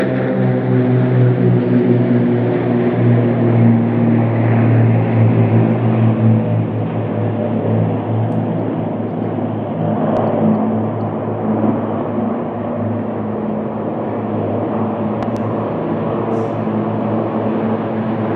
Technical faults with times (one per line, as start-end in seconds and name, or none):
10.17-10.19 loud pop
15.23-15.39 loud pop